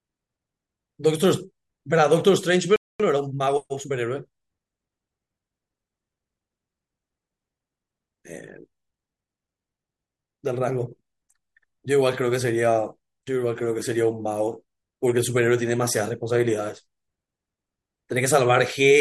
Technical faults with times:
2.76-3.00 playback stall
3.00-3.94 time-compressed catch-up

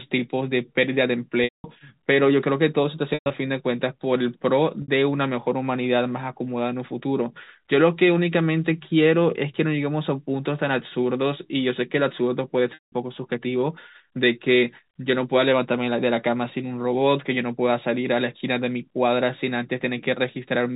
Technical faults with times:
1.44-1.64 packet loss with pitch repetition
3.14-3.30 packet loss with pitch repetition
4.82-4.88 packet loss with pitch repetition
12.74-12.92 packet loss with pitch repetition

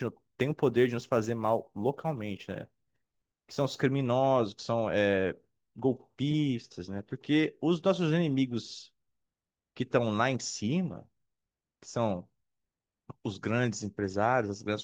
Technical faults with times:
0.00-3.82 sample clock jitter

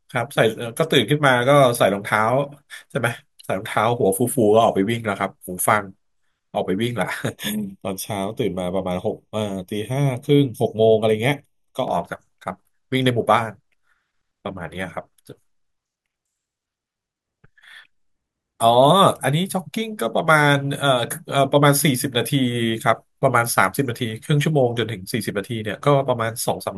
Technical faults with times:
7.29-11.88 channel delay (comb filtering)

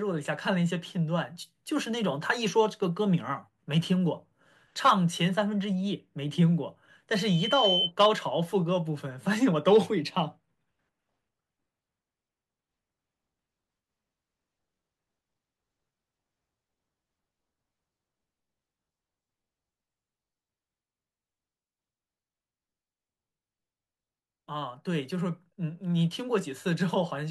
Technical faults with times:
7.13-7.92 loudspeaker feedback squeal

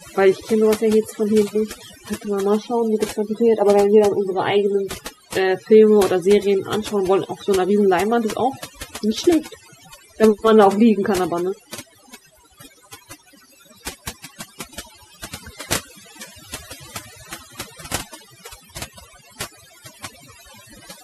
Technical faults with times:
0.00-21.03 overdone noise removal

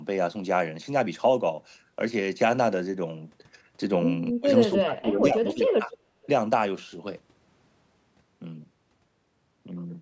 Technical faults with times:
4.32-5.91 speech suppressed in double talk
5.90-5.96 echo leak
6.23-6.28 echo leak

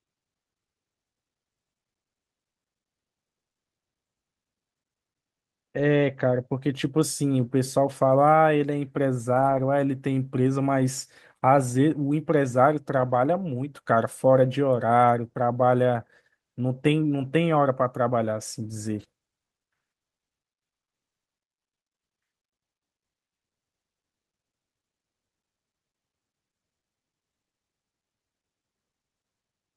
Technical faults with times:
9.33-9.59 lost packet rebuilt from error correction
12.97-13.15 lost packet rebuilt from error correction
18.99-19.05 lost packet rebuilt from error correction

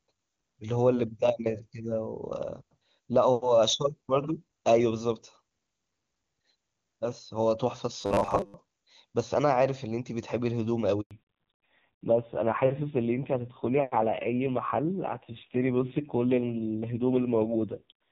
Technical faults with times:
8.01-8.55 robotic sound from repeated short buffers
11.01-11.11 handover gap
11.11-18.11 fallback to narrowband

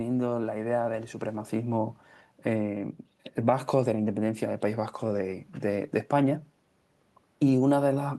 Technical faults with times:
none

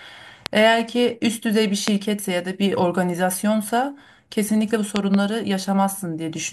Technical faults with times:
0.46-0.48 loud pop
1.88-1.90 loud pop
4.96-5.16 loud pop

